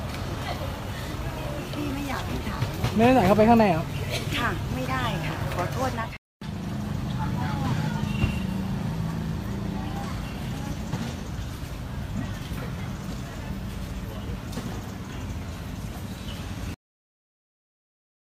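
At 16.74 s the audio has a cut-off end: the sound stops mid-event and falls straight to digital silence, which then holds until the file finishes about 1.5 s later. The final stretch of buffers was never written, so nothing after that instant reached the output. A deliberate fade or a natural ending would taper through a decay tail, and a brief dropout would let the sound resume. Here there is an abrupt cliff with no return.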